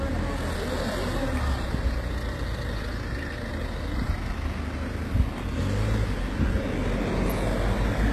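From start to finish the top end sounds bright but fake, gritty and metallic, with nothing above about 12.3 kHz. That's likely HE-AAC compression at a low rate, fitting roughly 16 kbps, where the treble is rebuilt from copied lower bands.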